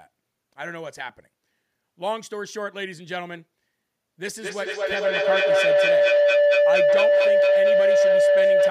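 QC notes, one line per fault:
4.3 s to the end, feedback howl: a second device in the same room is picking up the other device's loudspeaker output, so the signal circles from microphone to speaker and back with gain above unity on each pass. Rather than dying away, each repeat is louder and narrower until a tone of around 500 Hz dominates, pulsing roughly every fifth of a second with the loop delay and peaking about 11 dB above the speech.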